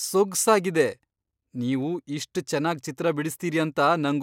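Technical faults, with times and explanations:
Nothing stood out as a technical fault on listening to this speech recording.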